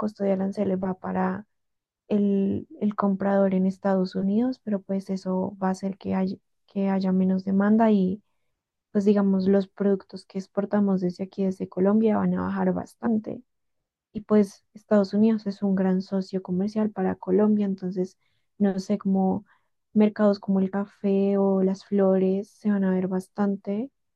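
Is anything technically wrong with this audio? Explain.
Yes. There are compressed frames skipped at 13.05 s and 20.74 s in this speech. Missing or rejected frames make the audio jump ahead about 70 ms, then about 20 ms.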